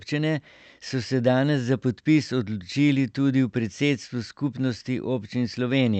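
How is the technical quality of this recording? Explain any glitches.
No glitches or faults can be heard in this speech recording. The audio has come through a WebRTC call path, and its high frequencies stop at 8 kHz, which fits Opus coding at around 48 kbps.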